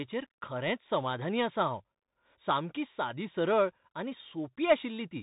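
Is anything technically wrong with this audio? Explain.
Yes. The whole clip carries the Bluetooth CVSD headset codec. Nothing above 3.8 kHz survives. A one-bit adaptive step tracks the waveform, which fits a 64 kbps link, leaving scratchy s sounds and granular hiss.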